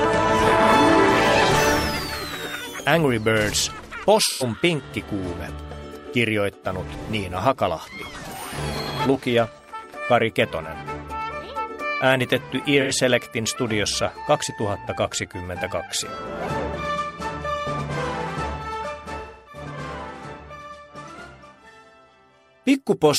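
AAC frame loss with concealment: dropped frames forced the decoder to rebuild the gaps from the last good spectrum, leaving brief smeared, phasey patches at 4.25–4.43 s and 12.81–12.92 s (about 85 ms each, fitting two lost frames), and a longer 0.26 s dip at 19.21–19.62 s.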